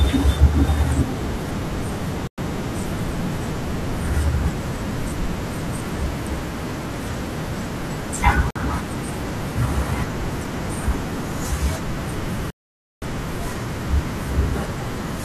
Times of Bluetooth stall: 2.27-2.38, 8.50-8.56, 12.50-13.02

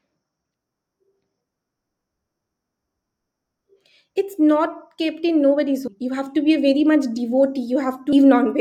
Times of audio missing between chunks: 5.87, 8.12

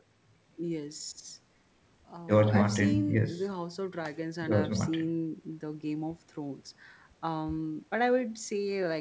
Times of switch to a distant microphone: none

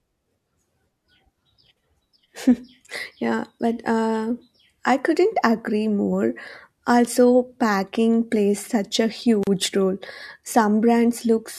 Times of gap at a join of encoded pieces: 9.43-9.47

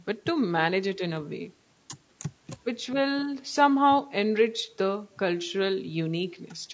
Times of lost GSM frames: none

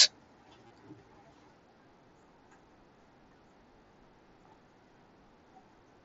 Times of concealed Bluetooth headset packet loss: 0.67-0.70, 3.87-3.90

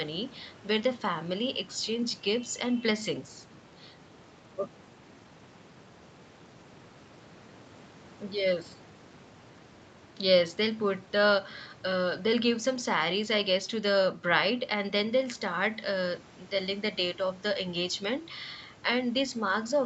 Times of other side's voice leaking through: none

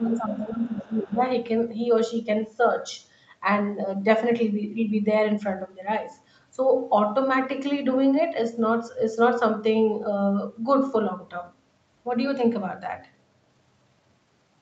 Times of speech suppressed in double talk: 0.00-1.22

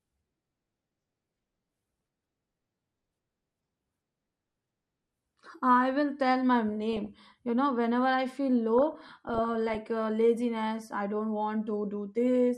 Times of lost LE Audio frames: none

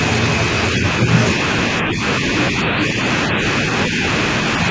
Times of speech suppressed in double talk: 0.76-0.85, 1.81-2.02, 2.51-3.45

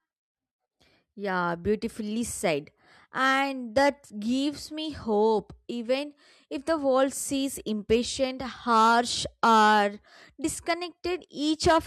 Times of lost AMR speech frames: none

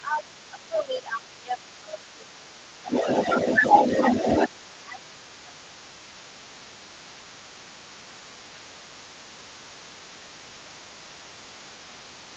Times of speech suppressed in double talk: 0.00-2.93, 4.84-6.64, 7.08-7.79, 8.10-8.21, 8.52-8.82, 9.35-12.07

